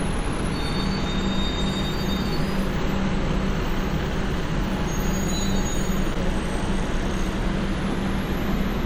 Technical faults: damaged data in a compressed stream

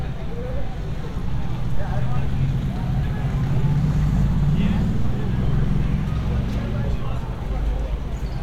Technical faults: none

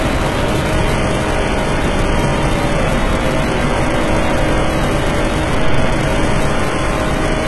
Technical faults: HE-AAC compression

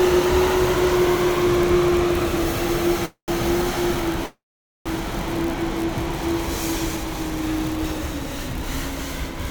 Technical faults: call audio freeze

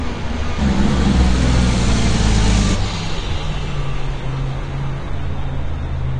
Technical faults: AAC compression

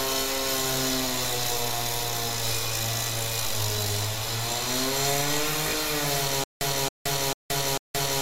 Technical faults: stutter with silent gaps

